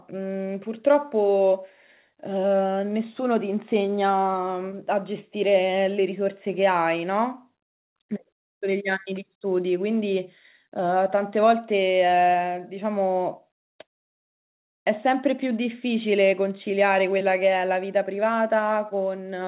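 Speech, with no technical faults to report.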